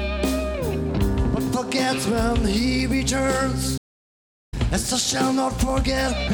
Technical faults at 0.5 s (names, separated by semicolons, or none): none